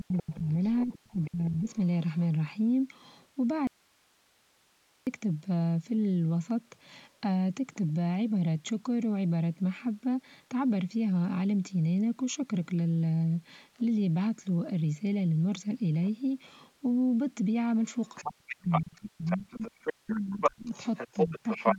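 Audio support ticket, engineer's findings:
Speech suppressed in double talk. Near-end speech ducks hard while a second voice is present. At 0.00–0.52 s, 0.85–1.68 s, 18.23–20.74 s and 21.26 s to the end. Deepest dips about 40 dB, about 35 dB at 0.85 s, about 20 dB at the close. Likely echo canceller or suppressor: it cannot separate near talk from loudspeaker echo, so it attenuates both.

Other side's voice leaking through. A second voice is audible under the near talker. Brief scraps at 0.17–0.34 s, about 15 dB down, and 0.68–1.29 s, about 20 dB down. A sustained stretch runs 17.85–21.77 s at roughly equal level to the near speech. Likely incomplete echo cancellation, leaving residual far-end playback in the mic feed.

Audio dropout to a faint residue. Abrupt cut at 3.67 s, return at 5.07 s, so about 1.4 s lost. The gap holds only hiss, about 40 dB below speech level. There is no fade in or out. 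The path downstream stayed live. Likely a capture-side interruption upstream of the noise floor, not a pause by the talker. The call mic chain's band tops out at 8 kHz.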